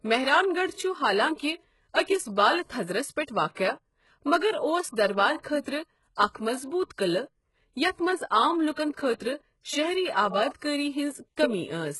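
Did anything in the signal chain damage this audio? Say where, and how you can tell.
Yes, at the codec stage, and the damage runs through the whole speech clip. Nothing comes through above 11.5 kHz, and the treble that remains sounds synthetic: sibilants are gritty and lispy, with a metallic sheen that doesn't line up with the voiced harmonics below. The likely cause is heavy HE-AAC compression, consistent with a bitrate near 12 kbps, where spectral band replication copies lower bands upward under a coarse envelope instead of coding the original highs.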